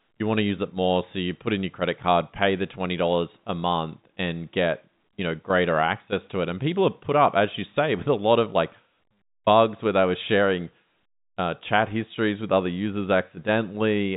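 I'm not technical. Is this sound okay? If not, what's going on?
Yes, nothing stood out as a problem when listening to this speech clip.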